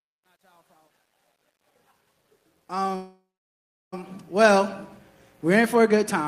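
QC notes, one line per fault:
0.0–4.71 s, truncation distortion on a fade: the fade-in is computed at too low a word length and without dither, which fits an 11-bit gain stage. Near the bottom of the level range the waveform collapses onto a handful of coarse square steps, so the quiet opening sounds gritty. It is worst from 0.0 to 2.4 s and eases as the fade-in rises smoothly to full level at 4.71 s.
2.95–3.94 s, call audio freeze: the playout buffer ran dry, likely because packets were held up in transit. About 0.97 s of fill is inserted: the last sound carries on briefly as a decaying buzz or hiss, then about 0.7 s of silence follows. When the stream resumes it picks up exactly where it stopped, so nothing is lost, but everything after is pushed back by 970 ms.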